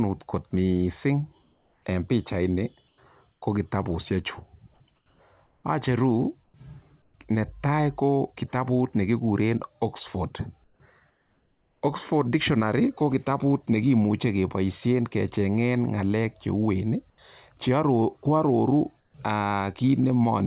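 Comfort noise in place of the background fills the pauses at 1.42–1.86 s (just before "en pichaini"), 2.88–3.42 s (just after it), 4.96–5.64, 6.44–7.14, 10.64–11.82, 17.1–17.18 and 19.0–19.14 s. The textured background gives way to a steady, featureless hiss that is up to about 8 dB quieter. This is likely discontinuous transmission, where the sender stops sending during pauses and the receiver makes up the noise. Unlike a noise gate or a dropout, the pauses never fall to silence. The band, limited by the call codec, stops at 4 kHz throughout.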